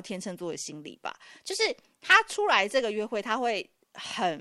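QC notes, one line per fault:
No faults found on this speech clip.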